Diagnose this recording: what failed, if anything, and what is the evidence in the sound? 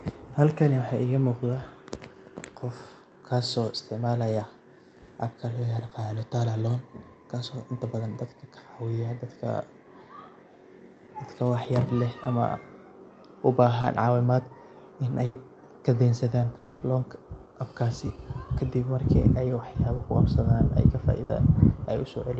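Short concealed packet loss at 5.89 s (after "appka loo"), 12.23, 13.81 and 19.97 s: the network stage dropped about 20 ms each time, and the decoder extrapolated it as a brief smear.

Burst of packet loss at 15.25–15.37 s (before "kadensadan loanka apkasi kadib") and 21.23–21.31 s: about 100 ms and 60 ms went missing, bridged by a fading held continuation.

Long network dropout at 16.57–16.83 s, just before "loanka apkasi kadib marki": about 240 ms is replaced by a fading continuation, likely from a network outage, and the sound resumes further on.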